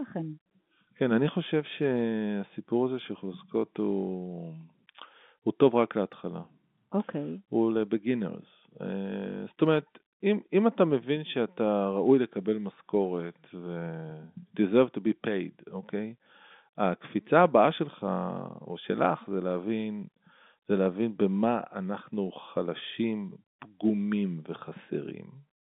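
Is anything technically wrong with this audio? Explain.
No, nothing in this speech recording points to a technical problem. It has the narrow sound of G.711 telephone coding, with the band held to roughly 200 Hz to 3.6 kHz as on an ordinary phone line.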